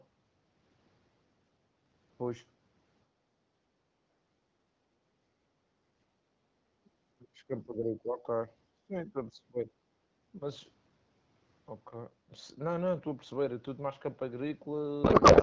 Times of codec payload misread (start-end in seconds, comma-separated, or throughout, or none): 15.04-15.42